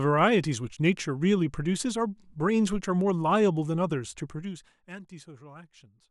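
No technical faults can be heard in the speech, so there is nothing to describe in time order.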